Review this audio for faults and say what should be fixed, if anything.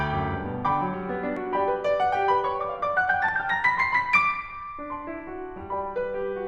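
The music jumps ahead at 1.37 s and again at 3.29 s. About 20 ms and 10 ms of sound are missing, with no gap. This is likely a dropped buffer (overrun). Give the capture thread higher priority or a larger buffer.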